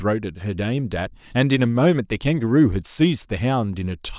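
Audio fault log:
No fault is heard in this speech clip.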